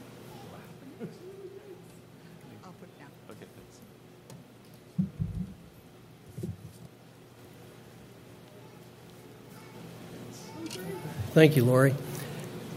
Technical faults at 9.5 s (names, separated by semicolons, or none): none